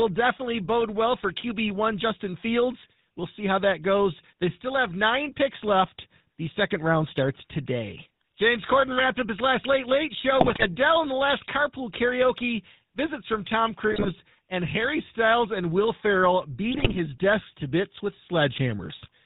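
Throughout, the speech runs through the GSM full-rate codec, which rebuilds the voice from a vocal-tract model driven by sparse, regular pulses and drops everything above 4 kHz. The result is a plainly audible buzzy, gravelly roughness, which fits the 13 kbit/s full-rate coder.

GSM bit errors strike at 10.4 to 10.68 s, before "and the last carpool"; 13.92 to 14.09 s; and 16.71 to 16.99 s, before "desk to bits with". Corrupted filter, pitch and gain values warp the spectrum and level, so each burst squawks, pops and gargles.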